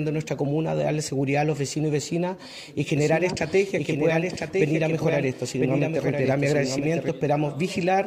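The audio carries a doubled audio track from 2.97 s to 7.09 s. A second copy trails the original by roughly one second, a few decibels quieter. It has no decay or room colour. It cuts in and out abruptly. A slower capture path is the likely cause.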